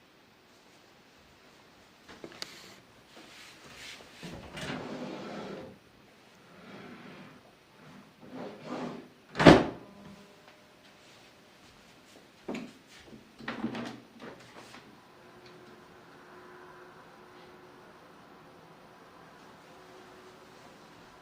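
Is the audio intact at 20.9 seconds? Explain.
Yes, the audio is intact at 20.9 seconds, with no fault audible at that moment.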